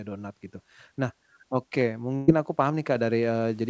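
From 2.16 to 2.30 s, in speech band-limited to nothing above 8 kHz by the call codec, the last sound is held and fades for about 116 ms, then the speech resumes roughly 120 ms further on. This is a burst of packet loss: concealment stretched the final sound across the gap.

At 2.96 s the speech and background noise step up together by about 4 dB and stay louder to the end. This sudden gain jump is likely a digital gain change applied from one sample to the next, with no ramp.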